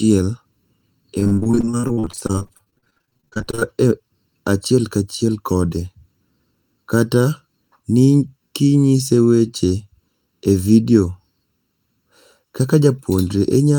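Speech, and the whole thing has a hollow, phasey colour from channel delay (comb filtering): one side runs late by well under a millisecond, so when the channels fold to mono they cancel at evenly spaced frequencies, with the first notch somewhere around 700 Hz. From 1.19 to 3.75 s there's repeated packet loss, and it sounds robotic and choppy. Dozens of short holes, the longest 44 ms, get papered over by stretching the last bit of sound, so nearly half that stretch is concealment rather than real audio.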